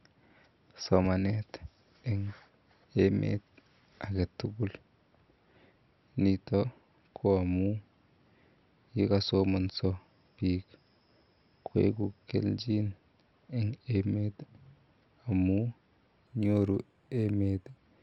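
From 16.27 s to 17.77 s the speech turns dull at the top while a faint metallic shimmer clings to sibilants. This is imaging from linear upsampling: the audio was raised from 12 kHz to 44.1 kHz by joining samples with straight lines, a weak filter that both rolls off the upper band and lets mirror copies of the spectrum through. The first image sits between 6 kHz and 12 kHz, roughly 45 dB below the signal.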